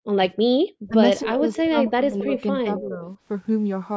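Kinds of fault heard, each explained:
Speech suppressed in double talk: The speech ducks while the far side is talking, most likely because the echo canceller couldn't tell the near talker from its own echo. There's a deep cut right at the start, a brief dip near 0.9 s, then a shallower, patchy squeeze from 1.24 to 3.07 s.
Echo leak: A faint copy of the far-end audio trails about 276 ms behind, probably where the loudspeaker echo slipped past the canceller. There's one scrap at 1.22 s at about 10 dB under the speech, then quieter ones around 1.54 to 1.63 s, 1.86 s and 2.19 to 2.41 s.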